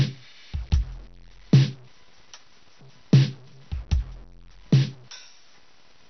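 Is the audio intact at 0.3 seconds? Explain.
No. At 0.3 seconds, as throughout the music, the signal was likely cut to very few bits by truncation without dither, consistent with 8-bit audio, leaving low bit depth without dither: gritty, signal-following grain roughly 30 dB below the music. Likely MP2 compression at what sounds like a low bitrate switches off the upper sub-bands, leaving nothing above 6.2 kHz and a dull, gurgling, granular texture.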